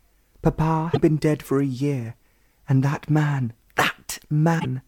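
Damaged data in the compressed stream leaves the decoder misreading corrupted frames, losing sync and hunting for the next valid frame header. Each time this produces a short chirp, squawk, click or hole in place of the sound, first from 0.90 to 0.97 s and again from 4.56 to 4.66 s.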